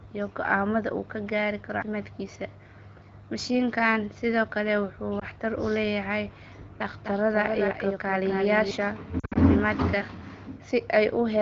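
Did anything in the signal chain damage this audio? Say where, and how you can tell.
Yes, in two places. The damage comes from the radio link feeding the AMR wideband decoder and from a duplicated path. The light, clear sound of the 12.65 kbit/s codec is not part of it.

Lost AMR speech frames: at 5.19 s a single 20 ms frame drops out, heard as a brief dip or warble. Between 9.20 and 9.38 s six frames go missing, scattered over about 160 ms, with the longest unbroken run 60 ms. The decoder fills each gap by repeating its last pitch and vocal tract settings at falling gain. This is unlike a buffer dropout, which would give hard silence or clicks.

Doubled audio track: from 6.91 to 8.71 s a second full-band copy of the sound runs roughly 300 ms behind the original, about 5 dB quieter. It is a single discrete repeat with no decay and no room colouring, and it starts and stops abruptly. That rules out reverberation or acoustic echo. 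The likely cause is the same signal being captured a second time by a slower path, or an edit that left two copies out of step.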